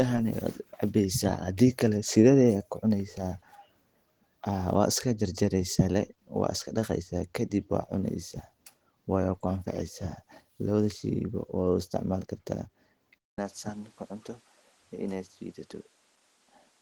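Throughout the speech there is plainly audible Opus compression, likely at a low rate in hybrid mode, which fits about 16 kbps. It sounds grainy and hoarse. A spectrogram shows smeared, noise-filled upper bands that still reach 20.1 kHz.

At 13.18 s the input likely switched to a poorer device. A gap of 200 ms appears as a flat stretch in the waveform, and then the sound turns duller and a little quieter. A spectrogram shows everything above 11.6 kHz cut off and a new noise floor sitting roughly 30 dB under the speech.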